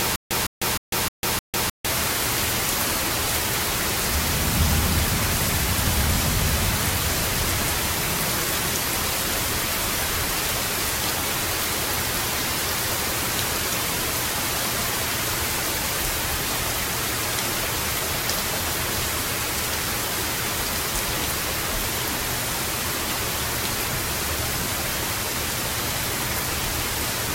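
An everyday-sound recording that opens with a stutter with silent gaps, already under way at 0.0 s and lasting to about 1.86 s. A 158 ms burst of the same audio repeats five times at an even period of about 308 ms, each copy followed by roughly 149 ms of digital silence. This pattern likely comes from a stalled player or stream replaying its last buffered fragment on each retry and then running dry, so the audio due in that span is lost.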